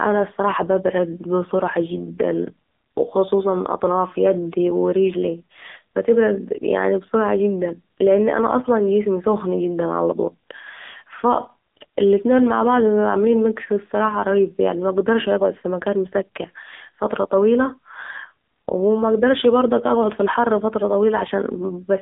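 From start to finish the speech sounds buzzy, synthetic and boxed in, with nothing above 3.7 kHz and a thin low end below about 250 Hz. This is the AMR narrowband mobile codec, heavily damaged and rebuilding each frame from a few pulses, consistent with a low mode near 6.7 kbps.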